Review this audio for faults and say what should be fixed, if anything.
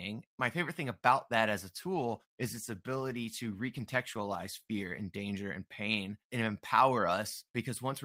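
A call bitrate drop from 1.82 to 5.07 s, after "about that as a" and before "danger and pain and", makes the speech rough and muffled. It fits a fall from 64 to 16 kb/s. A spectrogram shows the upper band thinning and smearing. A higher minimum bitrate floor would prevent it.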